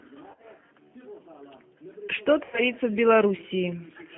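Throughout, the speech passes through a G.729 codec at 8 kbit/s. The decoder rebuilds each short frame from a vocal tract filter, a pitch predictor and a few pulses, so the sound is plainly rough and synthetic. On a spectrogram, energy sits between about 150 Hz and 3.4 kHz, with nothing above.

From 0.31 to 0.46 s there is VoIP packet loss concealed by the speech codec. About 80 ms of audio is missing, scattered over 120 ms, with the longest gap 30 ms. The decoder extends its last pitch and filter, so the sound breaks into smeared fragments. From 2.44 to 2.66 s about 90 ms is lost in the same way. There the sound is stretched and fades, and the voice stays weak or distorted for a short while after packets return.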